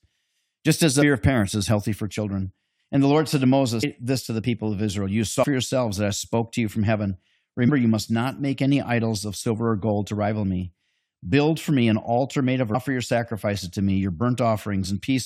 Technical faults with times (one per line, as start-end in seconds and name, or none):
1.01 compressed frames skipped
3.82 compressed frames skipped
5.42-5.44 compressed frames skipped
7.67 compressed frames skipped
12.74 compressed frames skipped